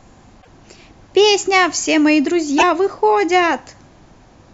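Speech with two bursts of damaged data in a compressed stream, at 0.38–0.47 s and 2.55–2.63 s: corrupted frames make the decoder lose sync, giving short blips.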